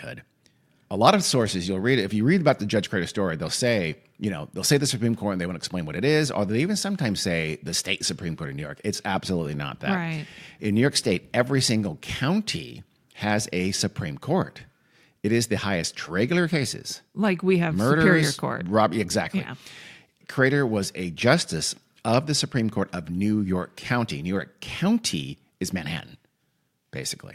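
Speech clip with one fault. At 16.06 to 16.11 s, after "it is the highest", the sound jumps ahead with a small blip and resumes at "cases like we have". Part of the programme is missing. This is likely a stream segment skipped, where one segment failed to load.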